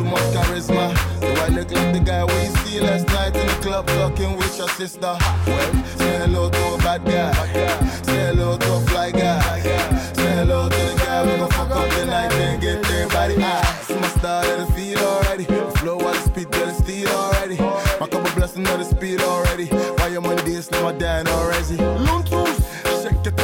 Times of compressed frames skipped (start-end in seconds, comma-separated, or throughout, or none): 7.41, 15.79, 20.39